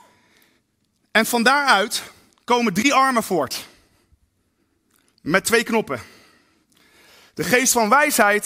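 Speech recording with no audible technical faults anywhere.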